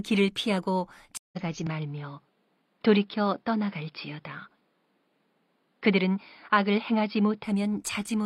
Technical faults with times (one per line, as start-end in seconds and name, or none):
0.00-8.26 sample clock jitter
1.17-1.38 stream reconnect
1.67-7.44 input switched to a poorer device